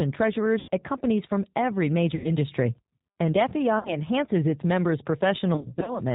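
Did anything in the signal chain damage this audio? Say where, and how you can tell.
Yes. Throughout, the speech sounds dull, slightly rough and synthetic, with nothing above 4 kHz. That points to the codec stage: a G.729 speech codec at 8 kbit/s, which rebuilds each 10 ms frame from a vocal tract filter, pitch predictor and a few pulses.

At 0.59–0.70 s, 2.15–2.37 s and 3.79–3.97 s the speech smears into a buzzy tone or coloured noise that fades, and stays weak briefly afterward. Between 5.55 and 5.99 s short dropouts cluster. This is network-stage VoIP packet loss concealed by the speech codec, which extrapolates its last pitch and filter while lowering gain.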